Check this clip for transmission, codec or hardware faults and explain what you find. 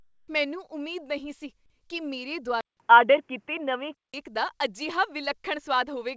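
Two faults are audible in this speech clip, both on a G.722-type call path whose band ends around 8 kHz.

Short concealed packet loss, 1.88–1.91 s, between "ਨਹੀਂ ਸੀ" and "ਕੀ ਮੇਰੇ": about 20 ms of audio was missing, and about 11 ms was extrapolated from the preceding sound before blending back, giving a brief smear.

Input switched to a poorer device, 2.61–4.14 s, after "ਨਹੀਂ ਸੀ ਕੀ ਮੇਰੇ": a 191 ms silence, then boxy, band-limited sound with nothing above 3.4 kHz. The level shifts by about 5 dB, and new noise sits roughly 45 dB down. The likely cause is a switch to another microphone or to a headset's call profile.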